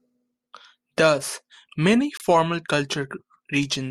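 At 2.17 s to 2.23 s the speech is broken by a corrupt frame decoded. Flipped bits in a couple of compressed frames were played anyway. Misread values push energy to wrong frequencies, giving a short chirp, squeak, blip or burst of noise peaking around -25 dBFS.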